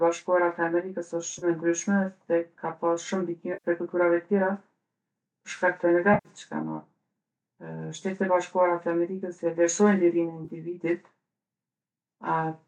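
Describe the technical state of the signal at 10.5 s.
AAC frame loss with concealment occurs from 10.45 to 10.50 s. About 30 ms of coded audio, which fits three short low-delay AAC frames, went missing, and the decoder patched the gap from the last good spectrum, leaving a brief smeared, noisy patch in the speech.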